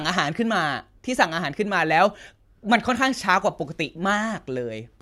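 Listening closely to the speech, nothing stood out as a technical problem at any point.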